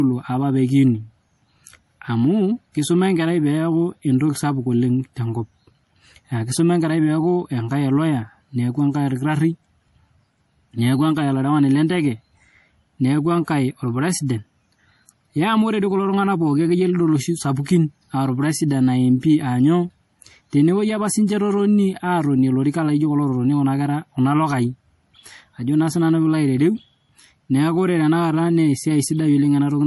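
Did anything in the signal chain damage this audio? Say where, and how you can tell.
Yes. Throughout the speech there is a watery, swirling quality, with s sounds turning chirpy and smeared, and nothing above 11.5 kHz. This points to the codec stage, likely MP3 compression at a low bitrate around 48 kbps, where the encoder cuts the treble and drops weak frequency lines frame by frame.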